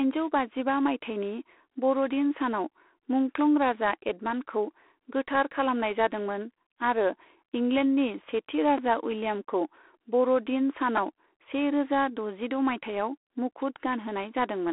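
From start to finish the speech carries G.726 ADPCM damage. Each sample is coded as a coarse difference from a predicted value, and the harsh, rasping hiss that rises and falls with the speech level points to the 24 kbit/s rate. The sound sits in a telephone band of 300 Hz to 3.4 kHz. On a spectrogram, energy stops at a hard ceiling near 3.9 kHz, with grainy noise filling the band wherever the speech is loud.

At 8.78 s, just after "आरो इंलेन्डनि सेथि", a repeated buffer occurs. New audio arrived late, so the player looped the last block three more times. Each piece is about 2.9 ms long, which fits a 128-sample buffer. The result is a brief buzz rather than a stutter, and essentially nothing seems to be lost. A zoomed waveform shows one identical short shape repeated four times, with hard joins. On a spectrogram it appears as a thin vertical smear.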